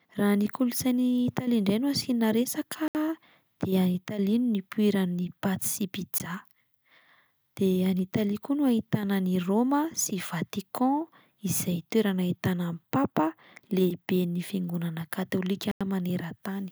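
At 2.88 to 2.95 s, 6.18 s and 15.71 to 15.81 s the speech drops into a block of digital silence (70, 17 and 93 ms; the last fits an unfilled 4096-sample buffer). The edges are abrupt, with no fade. Waveforms show flat, near-silent runs; spectrograms show blank columns edged by broadband lines.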